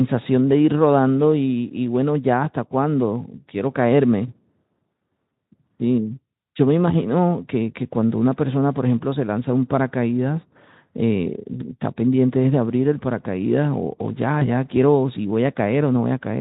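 At 14.39 s, running to about 14.49 s, the speech shows VoIP packet loss concealed by the speech codec. A gap of about 20 ms, which fits a single lost frame, was filled by the decoder extrapolating from its last pitch and filter state with falling gain. The result is a brief stretch of extrapolated, fading sound, and because each decoded frame depends on the previous one, the speech stays weak or distorted for a short while after packets return, before the Speex stream, lightly coded throughout, settles again.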